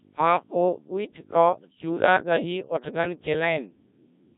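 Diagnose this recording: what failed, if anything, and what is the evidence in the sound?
Codec 2 vocoder throughout, a codec-stage fault: heavy robotic buzz, fitting a 1.3 kbit/s mode that rebuilds speech from sine waves, discarding the waveform.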